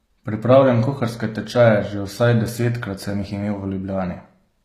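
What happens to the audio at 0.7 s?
At 0.7 s the speech carries HE-AAC compression, likely, present throughout. Treble is rebuilt from copied lower bands, so sibilants sound gritty. Nothing remains above 15.5 kHz, pointing to roughly 24 kbps.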